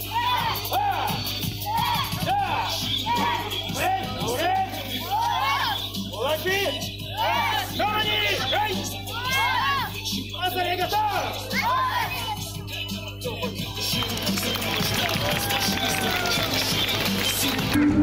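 A steady mains hum at 50 Hz runs under the whole clip, fairly loud at roughly 10 dB below the audio, a low tone with some low harmonics rather than a bright buzz. Overlap between stream segments causes tiny skips at 3.81, 7.79, 11.78 and 13.76 s, each removing about 7 to 16 ms. These fall on 2-second segment boundaries, and the sound jumps ahead instead of dropping into silence.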